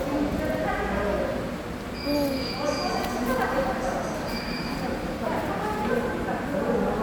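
No technical faults are audible anywhere in the recording.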